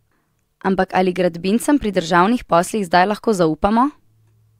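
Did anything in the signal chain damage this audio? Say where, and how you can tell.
No, no stage in the chain audibly damaged it.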